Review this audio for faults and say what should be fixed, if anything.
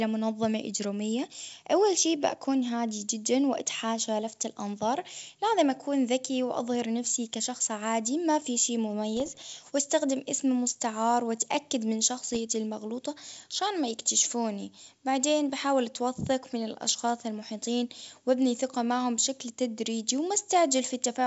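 Bit errors on an ADPCM link roughen the sound at 9.17–9.39 s, just after "عادي ما في شي", and at 12.24–12.37 s, after "إسم مستعار وأتأكد من". Each flipped bit throws off the decoder's step size and predictor, so it rings on as pops and rough bursts with brief level jumps. A waveform shows spikes and uneven amplitude, and a spectrogram shows broadband vertical streaks reaching the 7 kHz top of the G.722 band. Error protection with packet-loss concealment on the link would prevent this.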